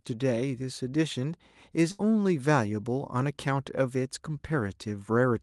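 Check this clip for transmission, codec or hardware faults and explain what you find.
One transmission fault stands out: a burst of packet loss from 1.91 to 2.01 s. Several packets in a row failed to arrive in time. The receiver covered about 75 ms by extending the last sound and fading it down. The speech then resumes with about 80 ms missing, so it jumps ahead. The call codec carries the audio with a cut-off at 12 kHz, which fits Opus at around 32 kbps.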